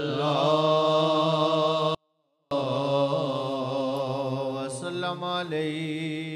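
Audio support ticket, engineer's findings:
24-bit alignment error (too quiet), 1.95 to 2.51 s. Likely cause: a stage in the capture or conversion path hands over 24-bit samples packed into the low bytes of 32-bit words, and the next stage reads them as full-scale 32-bit integers. Result: sound stays clean but drops by about 48 dB at once, near-inaudible, then returns to normal level.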